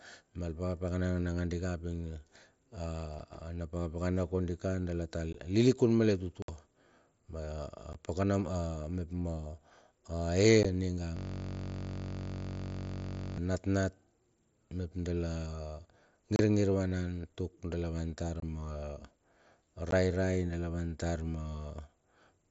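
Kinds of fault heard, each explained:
Unconcealed Bluetooth headset packet loss: short stretches of the headset audio stream never arrived and were left as silence, producing eight abrupt holes from 7.5 to 60 ms long, the longest at 6.42 s. A waveform shows flat gaps with sheer edges, and a spectrogram shows thin blank vertical strips.
System hang loop: the system stalled while the sound hardware kept replaying one 21.33 ms buffer, which fits a 1024-sample buffer, from 11.17 to 13.38 s. Over a hundred repeats create a steady 46.9 Hz buzz, seen as identical repeating cells on the waveform and evenly spaced horizontal harmonics on a spectrogram.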